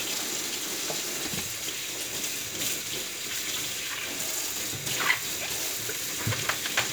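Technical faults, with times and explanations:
No technical faults heard anywhere in the recording.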